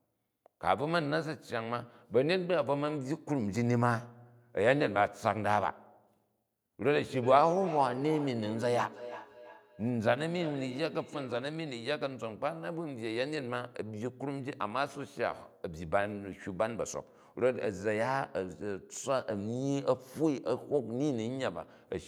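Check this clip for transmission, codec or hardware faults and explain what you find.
One fault stands out: a feedback echo between two devices, running from 7.22 to 11.57 s. The speech returns at a steady interval of roughly 300 ms, peaking about 13 dB below the direct speech. A second device in the same room is playing this call aloud, and this microphone picks that playback up again. Its echo canceller only removes its own device's output, so the copy slips through. On a spectrogram, each syllable's harmonics reappear as a fainter duplicate shifted right by that fixed gap. The waveform shows matching smaller bursts trailing each one.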